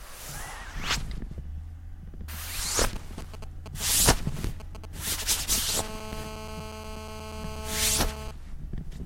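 From 2.96 s to 5.71 s a galloping dit-dit-dit of brief raspy buzzes cuts across the sound, around 10 dB below it. These are GSM signalling bursts: a nearby 2G phone sends short groups of radio pulses at 216.7 Hz while it handshakes with the network, and the audio circuitry rectifies them. On a spectrogram they form short, separated patches of evenly spaced harmonic lines at multiples of 217 Hz. The waveform shows clusters of sharp pulses with gaps between them.

At 5.75 s the pattern becomes a continuous GSM phone buzz that lasts until 8.31 s, at about 9 dB below the sound. Once the phone is in a call, its transmitter pulses steadily at 216.7 Hz. The rectified pulse train becomes a hard, steady drone full of harmonics that has nothing to do with the audio beneath it. A spectrogram shows an unbroken comb of horizontal lines at 217 Hz and its multiples, reaching well into the kHz range. The waveform carries regular spikes about 4.6 ms apart.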